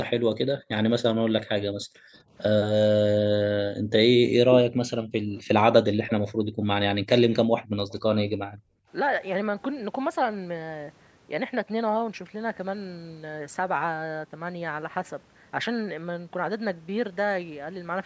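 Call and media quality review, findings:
Background gated by the echo canceller at 0.34–0.70, 1.81–2.13, 3.74–3.91, 5.04–5.32, 6.35–6.64 and 7.63–8.88 s. Room sound drops by up to about 40 dB for fractions of a second: canceller suppresses mic hard during far-end playback, releases afterwards.

Echo leak at 5.37–6.13 and 7.31–7.98 s. Faint delayed copy of the speech, about 0.28 s behind, about 15 dB then about 30 dB below the direct signal. Likely a far-end loudspeaker echo canceller passing residual mic pickup back. Band tops out at 8 kHz.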